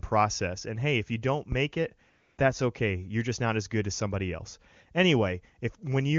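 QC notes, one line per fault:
2.09 to 2.37 s, AMR comfort noise: for 280 ms the phone treated the talker as silent and sent no speech frames, so the receiver patched the gap with smooth synthetic noise built from a rough level and spectrum estimate. The real background drops out and comes back at the edges. The AMR-WB path around it sounds clear, which fits a rate around 23.85 kbit/s.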